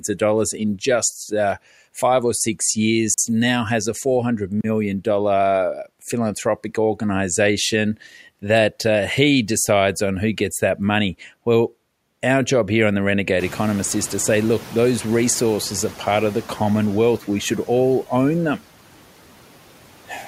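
Noise suppressor artifacts run through the whole clip: steady background noise is pulled down by about 12 dB between phrases and returns under the speech. At 3.14 s, after "uh five or six" and before "now has a", a block of digital silence cuts the audio out for 40 ms. The hard edges bracket a short hole, consistent with the output buffer not being filled in time. A second block of digital silence at 4.61 s lasts about 32 ms and has the same hard edges. At 13.39 s, after "job here on the", the room noise jumps by about 21 dB. The noise suppressor is caught catching up: for 2.63 s, until "of the" at 16.02 s, the new noise passes with only about 5 dB of reduction, then sinks as the estimate adapts.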